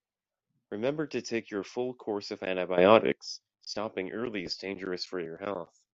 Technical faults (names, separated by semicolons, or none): sudden gain jump